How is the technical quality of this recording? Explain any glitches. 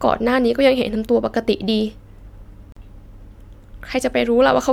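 There's one glitch: a gap at a join of encoded pieces at 2.72 to 2.77 s. The speech drops into a gap of about 42 ms with smeared edges, then resumes where it stopped. The pieces were encoded separately and joined untrimmed, so encoder delay and padding were left in.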